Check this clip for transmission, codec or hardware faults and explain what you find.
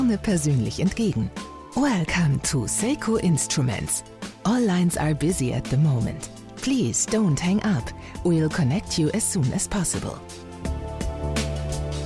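Nothing in this one stands out as a fault; there's nothing to flag anywhere along the way.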